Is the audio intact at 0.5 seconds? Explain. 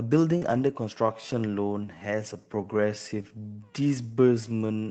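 No. From 0.41 to 0.63 s the sound turns rougher and noisier: several lost packets were rebuilt from Opus in-band error correction, low-bitrate copies carried in the following packets. Just before, 0.37 to 0.43 s, a 40 ms short concealed packet loss was filled by extending the previous sound, leaving a brief smear.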